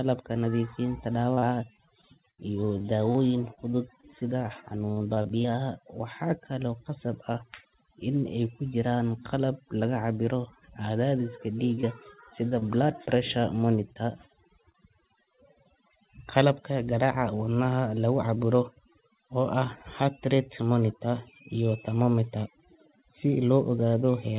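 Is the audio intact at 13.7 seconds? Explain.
No. The moment at 13.7 seconds falls inside a run of scattered short gaps between 11.75 and 14.76 seconds. Packets went missing one at a time, about seven of them, totalling 120 ms of lost audio. The longest hole is around 30 ms. The receiver filled each hole by stretching the sound just before it. About 5 percent of the stretch is patched this way. You hear brief ticks, small smears and hiccups in the speech.

The clip also carries overdone noise removal throughout, so 13.7 seconds is affected by it too. The noise reducer was set too hard. Frequency bands that sit near its noise estimate get pushed far down or switched off. Quiet parts of the voice are caught and removed with them. The background drops and breaks up into twinkling specks.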